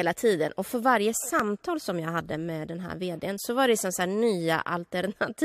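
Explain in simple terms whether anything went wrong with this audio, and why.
At about 1.40 s there is a single tiny skip, where the speech jumps forward by a tiny fraction of a second. This is an overlap between stream segments. The audio arrives in pieces about 4 seconds long, and two neighbouring pieces claimed the same moment in time. The player cut the doubled part away, but that sound was never actually repeated, so a sliver of real speech vanished and the waveform jumped. Unlike a dropout, no silent gap is added. Sound goes missing instead.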